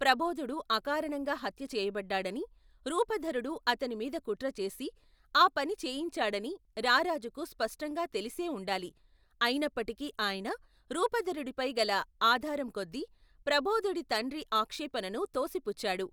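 No technical faults can be heard anywhere in the speech recording. Nothing in the signal stands out for any particular moment or needs a closer look.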